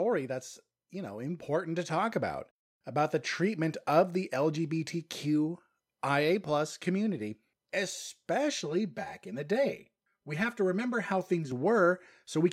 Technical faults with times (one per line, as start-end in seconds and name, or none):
0.05-0.71 automatic gain falling
0.91-3.15 automatic gain rising
8.62-11.52 channel delay (comb filtering)